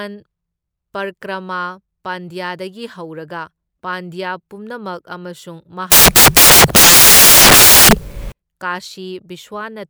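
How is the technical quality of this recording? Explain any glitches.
The recording has one serious fault. From 5.92 to 8.32 s, the samples are built from the wrong bytes: each sample's bytes are misassembled, so the rapidly varying low bits dominate. This produces loud, harsh broadband noise across the speech for about 2.4 s.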